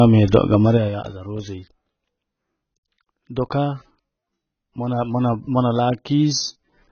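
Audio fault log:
throughout AAC compression: likely low-bitrate AAC-LC coding, near 18 kbps, drops everything above 6.5 kHz and starves the bands below, so the speech sounds dull, smeared and warbly.
0.60–1.15 s zipper noise: the level falls about 15 dB in unsmoothed 3 dB steps, roughly ten a second, each step clicking and together producing an audible ticking.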